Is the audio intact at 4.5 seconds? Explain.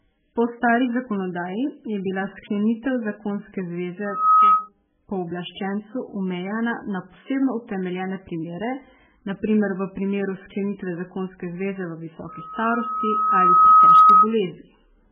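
No. A loudspeaker feedback squeal runs from 4.05 to 4.69 s, so it covers 4.5 s. A microphone is picking up the loudspeaker it feeds, and at 1.3 kHz the loop gain exceeds one. That tone feeds on itself. It swells over roughly a third of a second into a steady squeal. It then sits around 10 dB above the speech until it stops at 4.69 s.

The whole clip, including this moment, also carries heavy damage, likely from MP3 compression. Nothing is present above 4.7 kHz, so the treble is cut. The speech sounds watery and swirly, as weak frequency lines switch on and off from frame to frame. Attacks smear. The damage points to a very low bitrate, around 8 kbps, where the encoder runs short of bits.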